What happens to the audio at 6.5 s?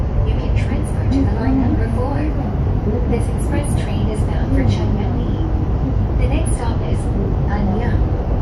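Nothing goes wrong at 6.5 s: the sound carries on intact through that moment, with no dropout, click, glitch or other fault.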